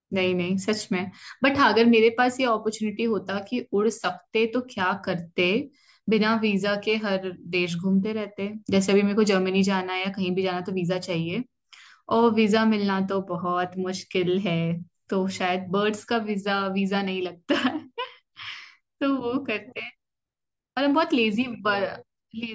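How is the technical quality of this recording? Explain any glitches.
Nothing in the recording stood out as a technical problem on listening.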